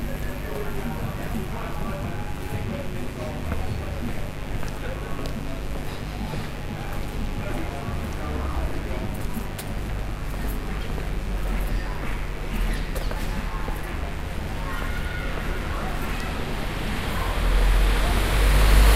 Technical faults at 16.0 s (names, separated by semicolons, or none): mains buzz